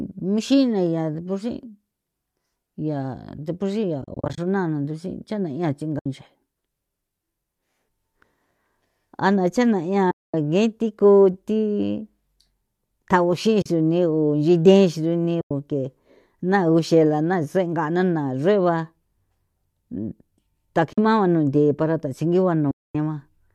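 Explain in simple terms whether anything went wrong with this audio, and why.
Yes. Chunks of the coded audio went missing on the way, and the decoder filled each gap with silence. This is AAC frame loss with muting. Each gap is a stretch of short frames, about 10 ms apiece, which is typical of the low-delay AAC likely used here. The sound fades out and back in, leaving soft holes in the speech.

The holes fall at these points:
4.02 to 4.38 s, as a cluster of brief dropouts
5.99 to 6.06 s, right after "cha'na ya"
10.11 to 10.34 s
13.62 to 13.66 s
15.41 to 15.51 s
20.93 to 20.98 s, just before "mao jno nthi para"
22.71 to 22.95 s, right after "jno nthi para thasingigua"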